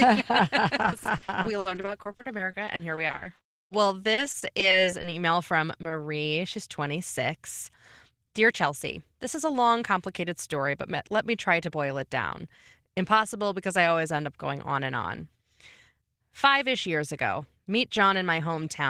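From 0.85 s to 5.06 s the speech is hit by repeated packet loss, giving a robotic sound. Thirty-five gaps arrive in close succession, the longest 60 ms, and each is bridged by extending the last stretch of signal. About 0.83 s of audio is synthesized this way, roughly a fifth of the span, and about 0.7 s of real content is lost. The result is choppy, with pieces missing. A spectrogram shows repeated smeared, overly regular harmonic patches and abrupt seams.

Overlapping the end of that stretch, from 3.64 s to 5.57 s, a jitter buffer slow-down stretches playback to 97% speed. Individual pitch periods and bits of pause are repeated to rebuild the buffer's reserve, adding 71 ms in total. The pitch stays the same while sounds drag slightly. On a waveform the pitch cycles look duplicated, with no change in their spacing.

Two brief instances of short concealed packet loss follow, at 5.82–5.86 s and 5.88–5.92 s. 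Each replaces 20 ms that never reached the decoder. The filled audio continues the previous pitch, or uses shaped noise for unvoiced parts, and then blends back into the real signal. Each one is heard as a tiny smear or wobble. On a spectrogram, each shows as a short patch of frozen spectral content.

A jitter buffer speed-up runs from 7.28 s to 8.66 s, ending just before "this is a long". Playback runs at 105% speed as short pitch-period chunks are cut out, roughly 70 ms altogether, to drain excess buffered delay. A second speed-up from 11.51 s to 12.45 s, right after "story but let me", runs at 103% and removes about 40 ms. In both the pitch is unchanged, and in the first the speech sounds slightly hurried. The waveform shows slightly compressed syllable timing, and the harmonic spacing on a spectrogram stays the same.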